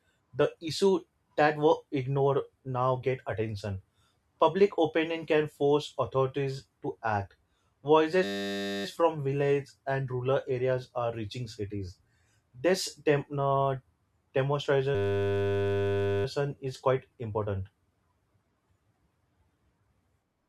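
System hang loop at 8.24–8.85 s and 14.95–16.25 s: a frozen driver replays one 10 ms buffer, giving a steady 100 Hz buzz rather than silence or a stutter.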